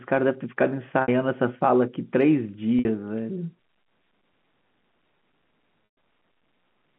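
Packet loss with pitch repetition hits at 1.02 s and 2.79 s, each gap 60 ms. The receiver repeats the last pitch period, giving a brief held, buzzy tone. At 5.85 s a 120 ms loss fades toward silence before the speech cross-fades back.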